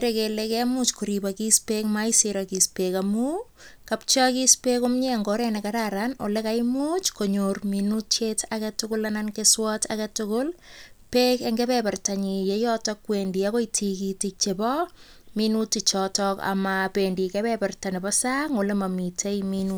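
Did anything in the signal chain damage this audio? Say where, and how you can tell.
No, nothing in the signal chain damaged this audio.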